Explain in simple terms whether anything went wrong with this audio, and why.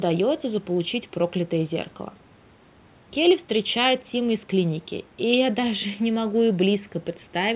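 Nothing went wrong with this speech recording. It carries the muffled, narrow sound of an ordinary phone call because the call path passes nothing above about 4 kHz, and that is normal.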